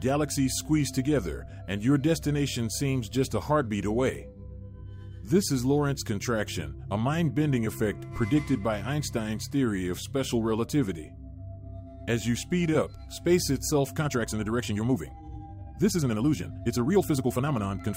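From about 13.87 s right through to the end, the pace suddenly jumps to roughly 1.47 times normal while the pitch stays put, so it comes across rushed. That's likely a time-stretched section, where software squeezed the audio by dropping short slices instead of resampling.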